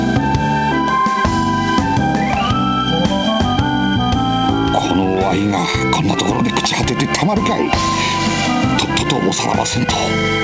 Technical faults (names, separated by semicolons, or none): none